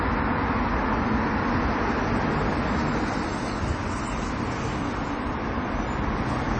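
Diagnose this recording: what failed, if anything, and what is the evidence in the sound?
MP3 compression, present throughout: a codec-stage fault. The audio has nothing above 8.3 kHz, and a plainly audible watery, swirly texture comes from weak spectral lines dropping in and out between frames. This likely points to MP3 encoding at a starved bitrate, around 32 kbps.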